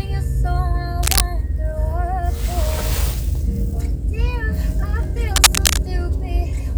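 From 1.03 to 1.22 s, and again from 5.36 to 5.78 s, cable scratch noise cuts in: dense, ragged rustling, first about as loud as the audio, then somewhat louder. It is likely a worn connector whose contact resistance flickered as it moved. On a spectrogram these show as irregular broadband smears; on the waveform, as jagged, uneven bursts.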